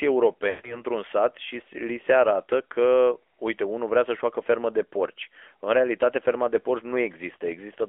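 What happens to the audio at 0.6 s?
The speech briefly smears, drags and fades toward silence from 0.50 to 0.84 s, just before "sat și". These are lost AMR speech frames: the decoder replays its last good pitch and vocal tract settings at falling gain, over a loss that fits about seven 20 ms frames. Throughout, the AMR narrowband mobile codec leaves the sound confined to about 300 Hz to 3.4 kHz, with plainly audible buzzy, synthetic coding damage that fits a mid-rate mode around 10.2 kbps.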